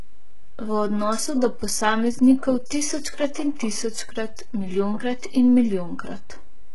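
Speech, carrying a DC offset for its whole length: the waveform sits shifted from zero by a constant amount. This isn't audible as such, but it eats into headroom and appears as steady energy at the very bottom of the spectrum, below any speech content. Throughout, the treble sounds rebuilt rather than recorded, with heavy codec damage, nothing above 11.4 kHz, and upper harmonics that don't align with those below the crossover. This is likely HE-AAC compression, where only the lower band is coded and spectral band replication copies it upward under a coarse envelope; the degree of damage fits a bitrate near 12 kbps. At 2.66 to 2.70 s there is pre-echo: a short hiss spread over about 47 ms ahead of an attack, which sounds softened. The transform spread quantisation noise sized for the loud onset back across the quiet part of its block.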